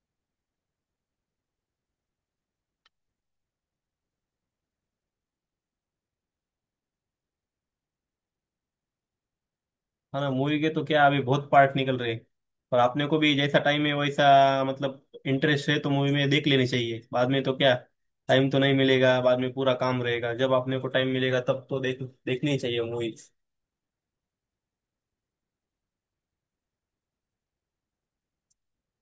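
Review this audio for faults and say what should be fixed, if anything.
Nothing to fix; no faults turned up in the audio.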